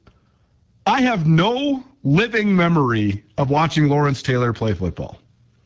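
From start to finish the speech sounds rough and raspy, with plainly audible codec damage. This is the AMR wideband (HD Voice) codec at a low rate, consistent with 8.85 kbit/s, the second-lowest it offers. At this rate the codec rebuilds speech below 6.4 kHz from a pulse-driven vocal tract model with too few bits to capture it cleanly, and fills the band up to 7 kHz with shaped noise.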